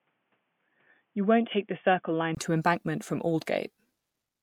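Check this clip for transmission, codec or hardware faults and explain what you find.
One fault is present. From 0.0 to 2.37 s the speech sounds narrow, dull or boxy and about 5 dB quieter, over its own background noise some 50 dB down. A 20 ms gap then brings full sound back. The likely cause is an input switched to a poorer device, another microphone or a headset call profile with a narrower band and its own level.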